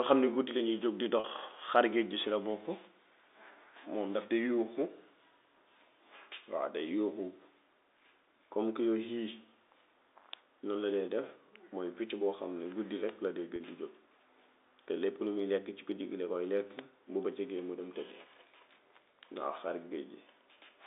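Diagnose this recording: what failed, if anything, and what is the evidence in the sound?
Twice the speech briefly holds on a slightly buzzy tone, at 1.2 s just after "guddi lañuy jóg di" and at 13.56 s after "la dee", each about 40 ms. This is network packet loss with pitch repetition: a gap that fits two 20 ms packets, bridged by repeating the last pitch period.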